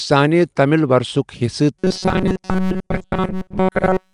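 From the very first moment the speech carries that rough, hissy halo with a smeared, underwater edge. That points to Nellymoser compression, likely from the old Flash microphone codec. It codes audio in short fixed blocks with very few bits per sample, so quieter bands get nothing and are filled in with noise. The damage is plainly audible the whole way through.

Then at about 1.77 s, and running right to the end, the voice turns into a rigid metallic buzz pinned near 188 Hz. That's robotic sound from repeated short buffers. New audio isn't arriving often enough, so the playback side keeps looping the last little chunk, roughly 5 ms of it, which forces that fixed pitch. Most of what you hear in that stretch, something like two thirds or more, is repeats rather than fresh audio, with the real material skipped. This is likely a starved buffer, and the buzz still loosely tracks the speech underneath.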